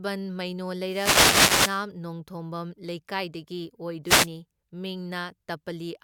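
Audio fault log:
0.83–1.86 s and 4.05–4.29 s, wireless microphone noise hit: the FM radio link fades as reflected signals cancel, so receiver noise swells into a static swish, roughly 1.0 s and then 0.24 s long, partly masking the speech. A spectrogram shows broadband vertical noise bands; the waveform shows a fuzzy, raised noise floor.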